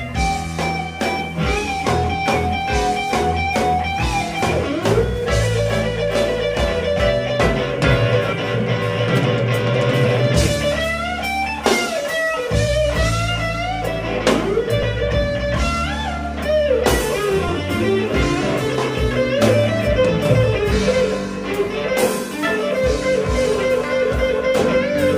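Two brief dropouts from lost LE Audio frames occur at 14.83 s and 17.48 s. Their lengths fit one and two 7.5 ms frames, filled by the LC3 decoder's sign-randomised repeat of the previous spectrum. Each sounds like a tiny noisy smear, visible as a short vertical noise smudge on a spectrogram and a roughened patch in the waveform. The light lossy compression leaves only subtle traces.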